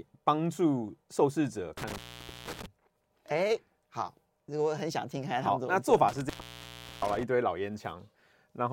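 At 1.78 to 2.66 s and again at 6.08 to 7.23 s, the speech suffers intermittent contact. A loose connection breaks for 0.48 s and then 0.72 s, leaving faint hiss. The crackle at each edge sets it apart from a clean digital dropout.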